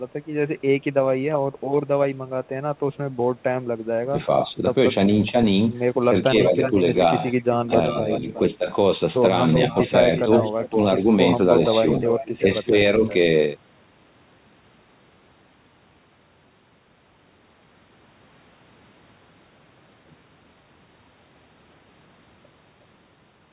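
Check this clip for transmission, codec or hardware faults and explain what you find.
The clip contains two kinds of fault, clustered between about 4 and 13 s. The audio is band-limited with nothing above 4 kHz, which fits a narrowband telephone codec such as G.711.

Speech suppressed in double talk occurs at 4.03–5.35 s, 6.28–6.76 s, 8.02–8.68 s, 9.91–10.78 s and 11.81–13.04 s. Within each span the speech dips in short bursts totalling about 150 to 300 milliseconds, typically by about 10 dB, deeper near 10 s (about 15 dB) and shallower near 12 s (about 5 dB). The likely cause is an echo canceller that, with both ends talking, cannot separate local speech from loudspeaker echo and turns both down.

Echo leak appears at 6.63–8.4 s, 9.53–10.69 s and 12.04–13.13 s. A delayed copy of the speech trails the original by 366 ms, sitting about 10 dB below it. This likely comes from a loudspeaker endpoint whose echo canceller left residual microphone pickup that was sent back.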